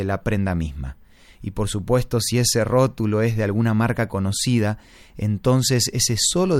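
No technical faults are audible.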